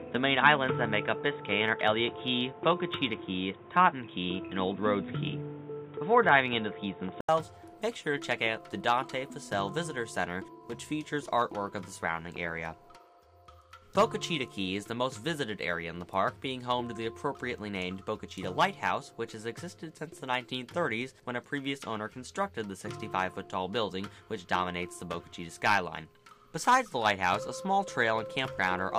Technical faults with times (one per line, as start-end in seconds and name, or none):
0.00-28.99 block size mismatch (truncated)
0.00-7.29 input switched to a poorer device